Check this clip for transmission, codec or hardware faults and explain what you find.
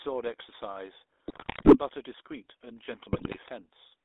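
There are two problems. The whole clip has gone through the GSM full-rate codec. Its pulse-driven vocal-tract model, which fits a 13 kbps coder, leaves the speech buzzy and gravelly, squeezed into roughly 300 Hz to 3.6 kHz.

GSM bit errors hit twice, from 1.28 to 1.78 s and from 3.12 to 3.39 s. Corrupted filter, pitch and gain values garble frames into squawks, pops and gargling, which points to a few percent of bits being flipped.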